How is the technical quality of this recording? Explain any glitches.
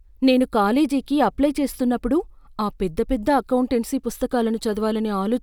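There's one glitch, a burst of mains hum from 0.77 to 2.27 s, ending just before "ఆ పెద్ద పెద్ద అకౌంటెన్సీ". It's a steady 50 Hz drone sitting roughly 30 dB under the speech, the sort of thing a ground loop or nearby transformer leaks into the signal path.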